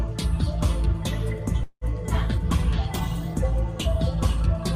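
At 1.63 s the sound hangs: the last moment is drawn out as a fading buzzy hiss, then drops to silence briefly before the audio resumes at 1.84 s, exactly where it left off. This is a call audio freeze. The likely cause is packets delayed in transit so the jitter buffer ran dry. The receiver filled about 180 ms by extending the final sound, and nothing was lost. Everything after the gap now runs about 180 ms late.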